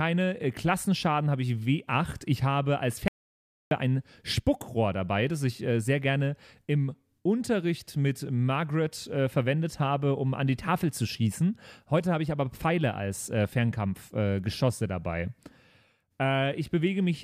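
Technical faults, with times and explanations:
3.08–3.71 s, audio dropout to silence: after "habe als" the speech cuts to total silence with no room tone, unlike a natural pause, likely from a lost input.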